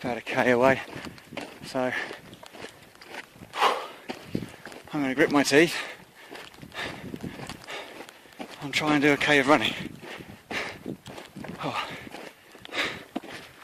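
Nothing in the audio stands out as a technical problem; from the first moment to the last it just carries on as it should, with nothing going wrong along the way.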